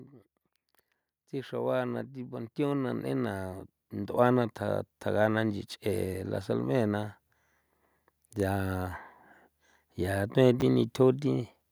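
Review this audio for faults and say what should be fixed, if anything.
From 1.3 to 7.1 s the speech and the room noise behind it swell together, climbing steadily by about 13 dB over nearly six seconds rather than jumping. This is automatic gain rising: the automatic gain control judged the input too quiet and slowly raised its gain, lifting everything in the signal at once, which is why the background grows as much as the speech. To prevent it, set a fixed input gain or disable the automatic gain control during recording.

Between 10.60 and 10.62 s there is a brief jumbled stutter. This is a case of chunks out of order: a 10 ms block of audio was delivered or written one block late, so it plays after the block that should have followed it. No audio is missing, but swapping the two creates hard joins where the waveform breaks abruptly. To prevent it, buffer and reorder incoming audio by sequence number or timestamp before playback or writing.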